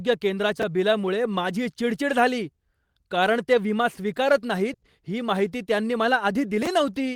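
At 0.60 to 0.63 s, chunks play out of order. A 10.7 ms chunk lands two chunks late, leaving a jumbled flicker. At 4.73 to 4.83 s, a burst of packet loss drops 90 ms. The concealment holds and fades the last sound before the audio skips ahead. At 6.62 to 6.67 s, chunks play out of order again, three chunks late.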